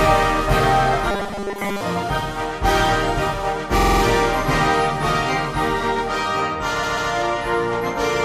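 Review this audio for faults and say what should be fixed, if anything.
From 1.11 to 1.81 s the sound turns into a rigid metallic buzz at 200 Hz, likely from robotic sound from repeated short buffers: a 5 ms buffer replayed while most of the real audio is skipped. Repeated frames cause two stutters. From 3.78 to 4.01 s, a 46.4 ms block plays five extra times, adding 232 ms. From 6.82 to 7.10 s, a 139.3 ms block repeats twice, adding 279 ms. To prevent these, keep the playback buffer fed in time and make sure compressed frames are written or sent only once.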